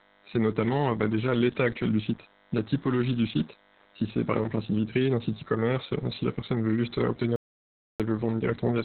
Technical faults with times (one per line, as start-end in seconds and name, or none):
0.00-8.85 DECT cordless phone buzz
0.00-8.85 Opus voice compression
7.36-8.00 audio dropout to silence